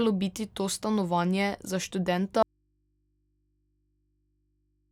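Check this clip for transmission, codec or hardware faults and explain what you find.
One fault is present. From 2.43 s to the end of the speech clip there is an audio dropout to a faint residue: the signal cuts off abruptly, leaving only mains hum roughly 45 dB down, likely from the source being lost while the downstream input stayed live and picked up hum.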